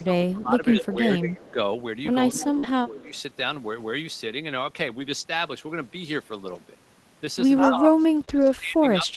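Speech over an Opus call path with audio up to about 12 kHz. An echo leak, a copy of the sound delayed by 192 ms, appears at 0.00–0.04 s, 1.29–1.51 s, 2.35–2.47 s and 3.00–3.19 s, about 30, 30, 15 and 35 dB below the speech, likely from the far end's echo canceller passing loudspeaker pickup back. Speech suppressed in double talk pulls the level down by up to about 15 dB across 0.00–1.58 s and 2.32–3.13 s, and by up to about 25 dB from 7.68 s to the end, likely where the canceller ducks overlapping talk. Lost packets rebuilt from error correction leave rougher, noisier stretches without gaps at 0.95–0.97 s and 2.63–2.65 s (20 ms each), 6.51–6.57 s and 8.17–8.23 s (40 ms each), and 8.29–8.51 s (120 ms). Short concealed packet loss smears the sound at 2.59–2.65 s, where about 40 ms is missing, and at 8.25–8.29 s, where 20 ms is missing, as the decoder extrapolates the preceding audio.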